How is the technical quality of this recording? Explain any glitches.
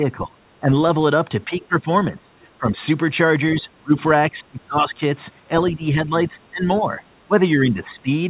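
The recording has one recurring glitch: the speech repeatedly sinks in level, in five stretches, at 0.0–0.74 s, 1.45–2.8 s, 3.55–3.93 s, 4.3–5.02 s and 5.7–8.09 s. The whole clip is band-limited, with nothing above 4 kHz, which fits a narrowband telephone codec such as G.711.

These dips are likely speech suppressed in double talk. While both ends spoke at once, the echo canceller could not separate the near talker from loudspeaker echo, so it pulled everything down. The speech ducks unevenly by about 15, 20, 30, 25 and 10 dB respectively, with the deepest cut near 3.6–3.9 s.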